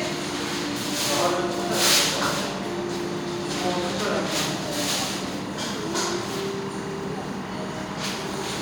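From start to finish a steady chirping warble sits behind the sounds, well below them. This is timecode bleed: a 24 frames per second linear timecode signal leaking in from a nearby track or cable, its square wave flipping between roughly 1 and 2 kHz.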